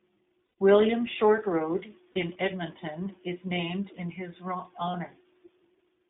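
A speech recording carried through the iLBC codec, with the audio confined to roughly 200 Hz to 3.6 kHz and a plainly audible rough, synthetic texture. Each stretch of excitation is coded independently, and the sound fits iLBC's 20 ms frame mode at about 15.2 kbps. Lost iLBC frames appear at 0.46 to 0.57 s, 2.12 to 2.18 s, and 4.92 to 4.96 s, the last just after "is named in his". The decoder fills each gap by repeating the last pitch cycle blended with noise, which sounds like a brief held, buzzy vowel. The first gap lasts about 120 ms, which points to six consecutive 20 ms frames. Speech recovers almost immediately after each gap.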